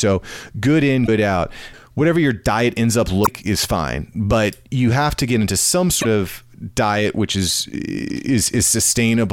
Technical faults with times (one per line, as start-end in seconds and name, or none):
1.03-1.09 damaged data in a compressed stream
3.23-3.28 damaged data in a compressed stream
6.00-6.05 damaged data in a compressed stream